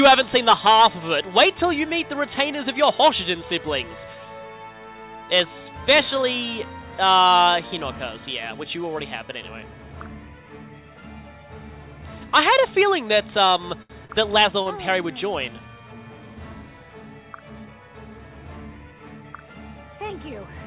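From 13.48 to 14.12 s there are repeated stalls (stutter): packets arrived late, the jitter buffer ran dry four times, and the receiver filled 133 ms by extending the last sound, the longest gap being 73 ms. Nothing is lost, but the audio drags and stutters. On a spectrogram these appear as short frozen, horizontally smeared bands. In the waveform they look like repeated copies of the same cycle.

At 14.62 to 14.68 s comes a short stall from a late packet: the delay jumped by 32 ms and that time was filled by stretching the preceding sound, so one moment is held too long. It shows as a brief flat, smeared patch in the spectrogram and a run of repeated cycles in the waveform. Throughout, the spectrogram shows nothing above 4 kHz, which fits a G.711 call path at 64 kbps.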